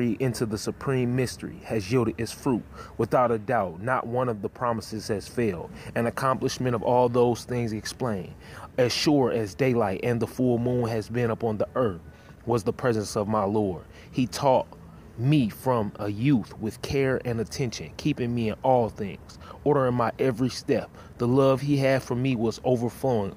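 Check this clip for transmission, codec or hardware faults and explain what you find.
No transmission, codec or hardware faults turn up in this clip.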